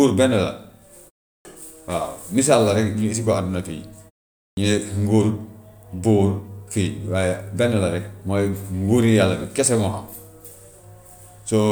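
At 1.40 s and again at 4.52 s the speech shows a clipped start after a pause. After silences of 0.38 s and 0.5 s the output path dozed and needed time to wake, so about 50 ms and 52 ms of onset were swallowed. The speech snaps in abruptly, missing its first sounds. On a waveform the envelope jumps straight to full level with no rise, and a spectrogram shows energy starting as a hard vertical edge.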